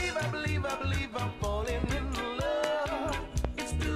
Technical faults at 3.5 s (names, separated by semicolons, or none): loud pop